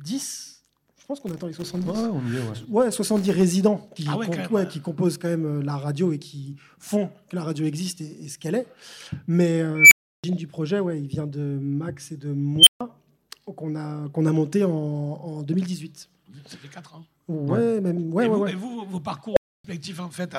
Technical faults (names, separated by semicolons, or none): unstable filter